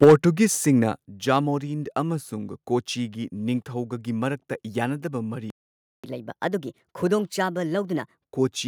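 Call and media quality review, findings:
Microphone overload, 0.02 to 0.14 s: harsh, crackling tops on the opening peaks, driven about 6 dB past full scale, with roughly a fifth of samples flattened. Likely mic input gain set too high, so the converter hits its ceiling and squares off each peak.

Microphone volume stepped down, at 0.04 s and again at 1.05 s: abrupt level drops of about 4 dB, then about 6 dB, affecting voice and background together. Likely call software automatic gain control reacting to the clipping and cutting device input volume in discrete steps rather than ramping.

Playback stall, 5.50 to 6.04 s: output goes fully silent mid-speech for about 534 ms, then resumes. Likely an underrun in the player buffer or a blocked audio thread, which leaves the device with nothing to render until data arrives again.

Catch-up at higher speed, 6.04 to 8.17 s: speech runs at 1.25x with pitch raised roughly four semitones, then returns to normal rate. 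The player resamples its accumulated backlog to recover the time lost in the preceding stall, so speed and pitch rise together.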